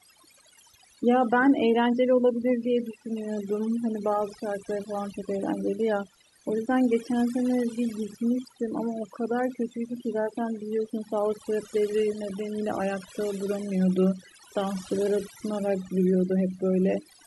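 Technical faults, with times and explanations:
Throughout, overdone noise removal: the background drops and breaks up into twinkling specks. A noise reducer set too strong is cutting individual frequency bands whenever they sit near its noise estimate, taking quiet parts of the voice with them.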